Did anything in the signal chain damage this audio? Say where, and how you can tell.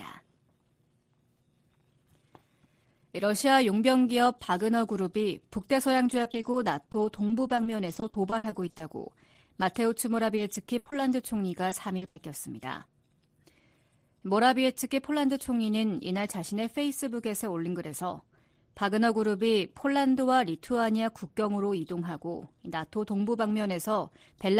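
Yes. The network stage dropped or delayed packets repeatedly, giving repeated packet loss (robotic sound) from 5.97 to 8.82 s and again from 10.12 to 12.18 s. About twenty short holes, up to 60 ms, fill the first stretch, and several, up to 80 ms, fill the second. Concealment stretched the last sound across each hole, so the audio turns choppy, with pieces missing.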